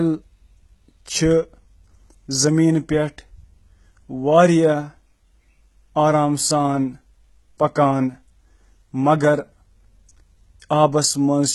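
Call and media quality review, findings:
HE-AAC compression artefacts, throughout the speech: gritty, lispy s sounds and metallic treble, likely from heavy HE-AAC coding at a very low rate consistent with about 16 kbps. Band replication copies lower bands upward, so the upper harmonics don't align. Spectrogram: blocky, smeared upper bands ending sharply near 11.9 kHz.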